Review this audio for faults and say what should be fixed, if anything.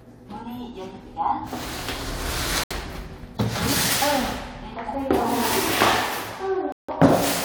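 Corrupt frame muted at 2.64–2.72 s and again at 6.72–6.90 s: the decoder rejected damaged compressed frames and the player filled them with silence, so you get abrupt holes of about 90 ms and 180 ms while timing holds. Adding error protection or checksummed retransmission on the transport would stop this.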